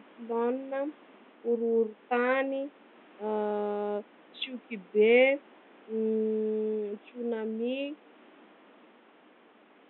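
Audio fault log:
No faults found; the room's background noise sits about 28 dB below the speech and belongs to the recording itself.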